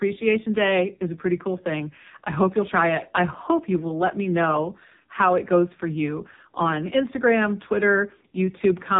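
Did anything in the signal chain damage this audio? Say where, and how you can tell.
Yes. Throughout the speech, nothing passes above 3.8 kHz, and the voice has a heavy buzzy, synthetic quality. That points to the codec stage, an AMR narrowband mobile codec, whose vocal-tract model driven by sparse pulses sounds like one of AMR-NB's lowest bitrate modes, near 6 kbps.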